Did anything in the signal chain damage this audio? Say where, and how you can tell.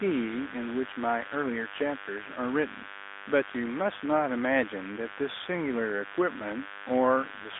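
Yes. Mains buzz entered in the analogue wiring: a raspy 50 Hz buzz runs throughout at about 15 dB below the speech, with harmonics rather than a smooth hum.

The AMR narrowband mobile codec damaged the speech throughout: nothing passes above 3.8 kHz, and the band sits at 250 Hz to 3.7 kHz. Its buzzy, synthetic texture, unlike a plain filter's dullness, fits roughly 10 kbps.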